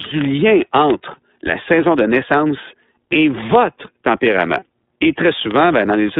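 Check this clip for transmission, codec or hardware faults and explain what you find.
The clip is speech carrying three kinds of fault: narrowband iLBC coding throughout, two bit error spikes, and one short gap from lost iLBC frames.

iLBC codec, throughout the clip. The sound is confined to roughly 200 Hz to 3.7 kHz, and the codec runs in iLBC's 30 ms frame mode at about 13.33 kbps. Each frame's excitation is coded on its own, giving a plainly audible rough, synthetic texture.

Bit error spikes at 4.27 s and 5.51 s. In each, a single flipped bit made one sample jump by a power of two and snap back. This is heard as a sharp, broadband tick, unrelated to the speech around it.

Lost iLBC frames, 4.59 to 4.62 s. The 30 ms gap fits a single lost frame. The decoder filled it by repeating the last pitch cycle mixed with noise, so it sounds like a brief held, buzzy or breathy vowel. The voice is right again almost at once after.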